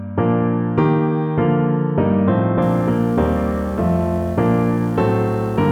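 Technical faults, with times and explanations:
2.62–5.72 s, video or display buzz: a 60 Hz field-rate buzz with hash above it, roughly 20 dB below the sound, from display coupling, unlike mains hum's smooth tone.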